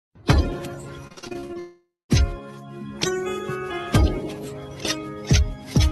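Between 1.07 and 1.57 s the audio turns choppy, with small pieces repeatedly dropping out and a stuttering texture where they should be. This is repeated packet loss. Short holes, the longest about 45 ms, follow one another closely, and each is patched by stretching the preceding sound. Nearly half of that half-second is synthetic fill rather than real signal, and about 220 ms of the original never arrives. Almost immediately after, from 1.59 to 2.11 s, the sound is replaced by a continuation of what came before. It fades into about 200 ms of near-silence, and the audio resumes with that stretch simply missing. This is most likely a long network dropout, with roughly half a second of audio lost and concealed by the receiver's fill. All of it travels through an Opus call path at about 48 kbps whose band tops out around 12 kHz.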